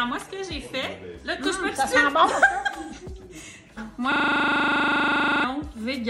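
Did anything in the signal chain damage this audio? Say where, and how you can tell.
Yes, a system hang loop at the driver or buffer stage: from 4.12 to 5.44 s, one 40 ms slice repeats as a 25 Hz buzz, dropping about a second and a half of audio.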